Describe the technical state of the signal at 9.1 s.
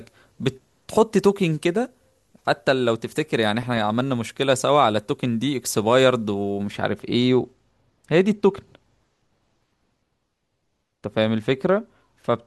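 At 9.1 s the signal is intact, with no audible technical fault at that moment.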